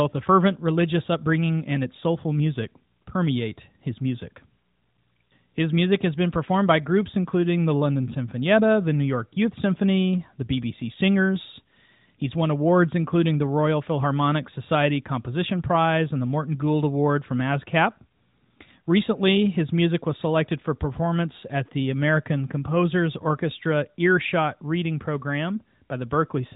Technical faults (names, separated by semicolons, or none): none